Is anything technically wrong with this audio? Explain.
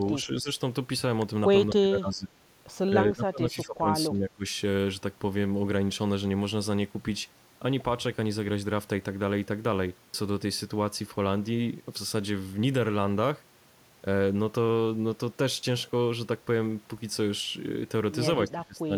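Yes. The speech is repeatedly turned down, likely by speech suppressed in double talk: with loudspeaker echo playing, an echo canceller confused the local talker with echo and attenuated both. The speech dips by about 10 to 25 dB at 0.0–0.5 s, 1.72–2.31 s, 2.9–3.87 s, 4.07–4.51 s and 18.48–18.93 s. The deepest dip falls in the 2.9 s stretch, and the dips total roughly 2.3 seconds.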